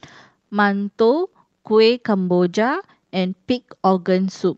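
A speech recording carried over an Opus call path whose top end stops near 8 kHz shows clock drift between sender and receiver: the sender's audio clock runs around five percent slow, so the receiver's jitter buffer keeps draining and must be topped up with repeated material to keep playback going. That mismatch drives repeated timing corrections from 0.92 s to 4.46 s, where playback runs at 96% speed as small repeated pieces are slipped in at uneven intervals, all in the same stretching direction. Together they add roughly 150 ms, heard as faint hiccups and a slightly dragging, unsteady tempo rather than any single obvious glitch.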